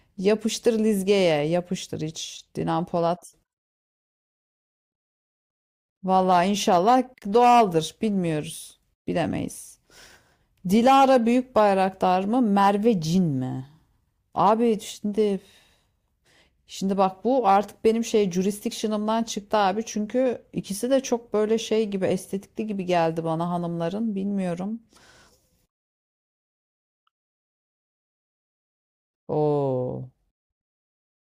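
No technical faults can be heard in this speech.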